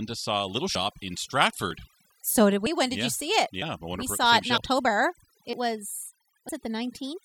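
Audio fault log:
throughout: overdone noise removal. Background sinks to near silence with twinkling specks. Bands near the noise floor are cut away, taking quiet parts of the voice with them.
0.75, 1.71, 2.66, 3.62, 4.58, 5.53 and 6.49 s: audio missing between chunks. Short skips recur about once a second, each losing a few tens of milliseconds, likely dropped at 1-second processing chunk boundaries.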